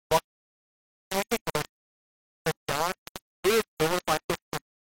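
Throughout the speech, the signal was likely rounded to very few bits without dither; the coarseness fits a 3-bit depth. The rounding error follows the signal, so grainy distortion rides on the speech, with the error nearly as loud as the speech itself.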